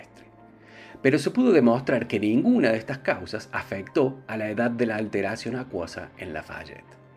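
No technical faults are audible.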